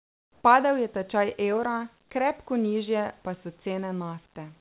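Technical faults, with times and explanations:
0 to 0.44 s, comfort noise in place of the background: the opening 440 ms is a smooth, detail-free hiss about 4 dB quieter than the real background, likely from discontinuous transmission, where the receiver synthesises noise while no speech is being sent.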